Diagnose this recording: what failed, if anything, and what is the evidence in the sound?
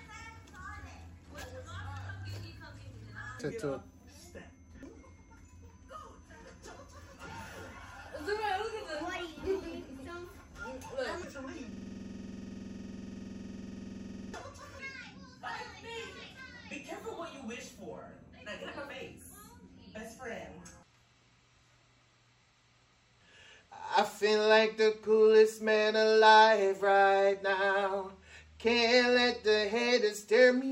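A system hang loop at the driver or buffer stage runs from 11.72 to 14.34 s. A 46.44 ms slice of sound repeats exactly, about 56 times, producing a rough buzz near 21.5 Hz in place of the real audio. The host froze while the interface kept replaying its ring buffer, and that loop length fits a 2048-sample buffer. A waveform shows identical blocks tiled end to end, and a spectrogram shows a frozen spectrum ruled by evenly spaced vertical seams.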